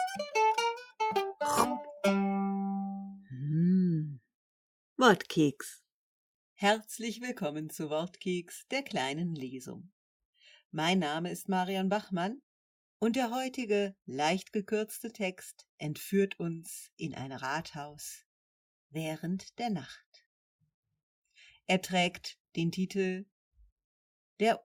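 Listening closely, nothing in the audio stood out as a technical fault at any point.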